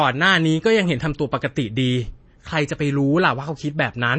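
Speech, likely passed through MP3 compression at a rate fitting about 32 kbps: the treble stops at 8.3 kHz throughout, and flickering frequency lines leave a watery, swirly texture.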